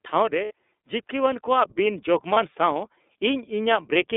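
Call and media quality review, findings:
iLBC codec, whole clip. Speech band-limited to about 250 Hz to 3.6 kHz, with nothing above 4 kHz. Rough, slightly synthetic texture, plainly audible. The sound fits iLBC's 30 ms, 13.33 kbps mode, each frame's excitation coded independently of the previous frame.

Lost iLBC frames at 0.45 s (60 ms, which fits two lost frames) and 2.33 s (30 ms, which fits one). Brief held, buzzy vowel-like fill. The decoder repeats the last pitch cycle mixed with noise. Because frames stand alone, the speech is clean again immediately afterward.

Automatic gain rising, 1.1 to 3.97 s. Speech and background swell together by about 5 dB over nearly three seconds. The AGC judged the input too quiet and gradually raised its gain.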